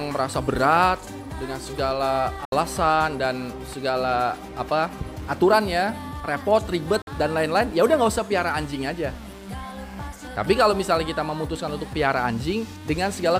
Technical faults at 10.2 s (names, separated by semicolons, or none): none